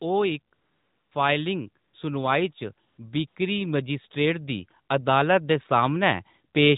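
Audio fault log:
0.54–1.12 s, 1.84–1.94 s, 2.88–2.98 s, 3.28–3.36 s, AMR comfort noise: the real background drops out and a smooth, even hiss switches in for 580, 100, 100 and 80 ms. The phone judged these gaps silent and stopped sending speech frames, so the receiver synthesised noise from a rough level-and-spectrum sketch, over the light narrowband coloration of the 12.2 kbps link.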